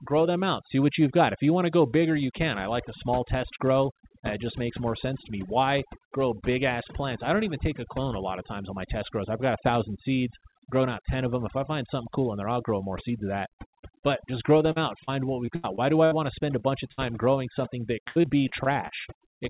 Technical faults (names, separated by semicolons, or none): overdone noise removal; short concealed packet loss; repeated packet loss (robotic sound); burst of packet loss